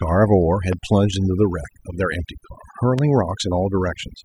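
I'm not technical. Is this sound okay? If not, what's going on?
No. Two problems can be heard.

Overdone noise removal runs through the whole recording. A cleanup tool meant to strip out background hiss was set far too strong. It shuts off any slice of the sound that seems close to the hiss, and the quieter parts of the voice get cut along with it. The gaps between words fall to near silence with twinkling specks.

Loud pops occur twice, from 0.73 to 0.75 s and again from 2.99 to 3.01 s. Each is a single sharp pop, far louder than the speech, lasting only a split second while the talking carries on underneath. The likely cause is a sudden electrical jolt reaching the recording, such as a plug being connected, a switch being flipped, static, or a brief glitch in the equipment.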